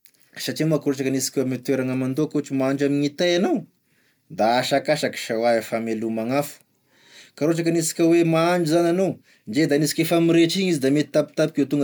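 Throughout, the speech is swirly and hollow with smeared attacks, likely generation loss: noise stacking from around four MP3 re-encodes near 130 kbit/s.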